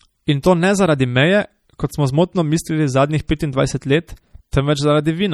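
MP3 compression runs through the whole clip: the speech sounds watery and swirly, with faint detail flickering in and out from moment to moment, so s sounds turn metallic and attacks blur. This is likely a low-bitrate MP3 encode, one that fits roughly 48 kbps, where the encoder ran short of bits and zeroed weak frequency lines that switch on and off between frames.

Pre-echo appears at 0.43 s, just before "to ne zaradi meje", and again at 3.39 s, right after "smo zmotno mislili zadnjih". Each time a short hiss of about 11 to 13 ms leads into a sharp onset, which then sounds soft. The codec spreads its quantisation noise across a whole block, so the noise sized for the loud attack leaks into the quiet instant before it.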